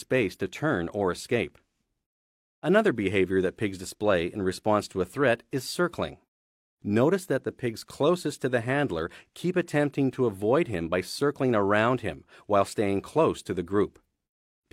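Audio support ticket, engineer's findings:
No faults found on listening. Nothing audible to trace to any component.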